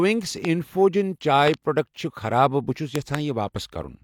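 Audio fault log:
0.45–0.47 s, loud pop: A single sharp pop sits about 10 dB above the speech. It sounds like a sudden voltage step, likely from a plug, switch, static or driver glitch. The speech carries on underneath.
1.48–1.56 s, loud pop: Two pops in quick succession, about 20 dB above the speech. Each pulse is shaped by the circuits downstream.
2.96–3.17 s, loud pop: Another pair of pops, about 20 dB above the speech, with the speech continuing beneath.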